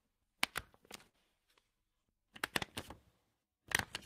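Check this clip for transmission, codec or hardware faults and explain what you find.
Two short stalls from a late packet affect this recording of sounds. The first runs from 1.09 to 1.16 s, with 42 ms filled in; the second from 2.04 to 2.08 s, with 20 ms filled in. Each time the packet missed its playout deadline, the jitter buffer emptied, and the receiver extended the last sound until the data arrived, then resumed from the same point. No audio is lost, but the held sound is audibly stretched, and playback ends up 42 ms and then a further 20 ms later.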